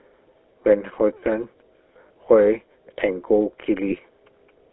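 Throughout, the speech carries GSM full-rate codec damage: band-limited to roughly 300 Hz to 3.4 kHz, with a plainly audible buzzy, gravelly roughness. The codec rebuilds the voice from a vocal-tract model driven by coarsely sampled pulse excitation, which fits a 13 kbps full-rate stream.

At 2.08 s and again at 3.90 s, lost GSM frames cause brief glitches. Each time, the decoder repeats the settings of the previous good frame, giving a short rough, metallic ring that fits a single lost 20 ms frame.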